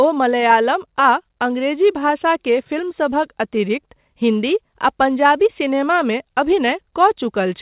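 Clock drift between sender and receiver runs through this speech clip: the sender's clock is about 2 percent slow, so the jitter buffer keeps draining and the receiver must fill the gap with extra audio rather than let playback run dry. Repeated timing corrections run from 0.59 s to 7.15 s as small, unevenly spaced edits, all stretching the sound, with playback at 99 percent speed and roughly a tenth of a second added overall. Nothing is heard above 4 kHz, which fits a G.711 mu-law call path at 64 kbps.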